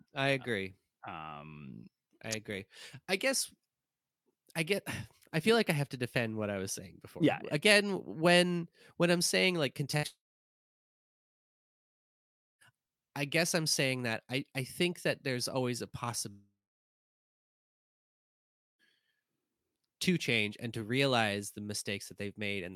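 At 9.91 to 9.95 s, a short concealed packet loss: about 20 ms of audio arrived too late for the decoder, and the receiver bridged the hole by extending the preceding sound before blending back, so a brief smear or wobble is heard just before the longer disruptions begin.

Right after, at 9.97 to 10.05 s, following "when I'm saying like", comes a burst of packet loss. Several packets in a row went missing, and about 60 ms was synthesised from the last sound, heard as a brief held, fading buzz or hiss in place of real audio.

From 10.07 to 12.73 s, and again from 16.29 to 18.81 s after "that there's always a", there is a long network dropout, likely from the connection stalling. Each time the concealment fades within a few tenths of a second and roughly 2.3 to 2.4 s of silence follows. The first gap resumes at "I guess I'm saying", with the material in between lost.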